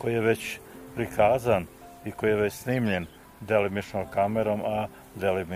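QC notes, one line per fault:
No faults heard anywhere in this clip.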